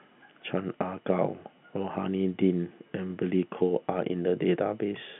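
No technical faults occur in this speech at any point, so there is nothing to describe in time order; it simply carries the narrow telephone band, with nothing above 3.8 kHz.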